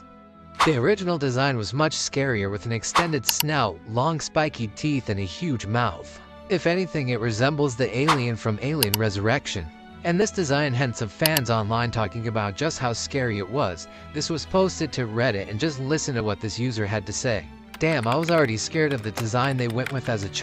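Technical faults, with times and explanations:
4.23 s, 10.22 s, 16.20 s: audio missing between chunks. Brief skips recur every 6.0 s, each dropping very roughly 15 ms, likely lost as one chunk closes and the next opens, with the two sides butted together.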